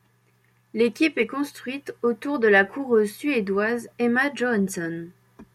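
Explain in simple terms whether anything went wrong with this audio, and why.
Nothing went wrong here: the speech is intact throughout, with no faults to report.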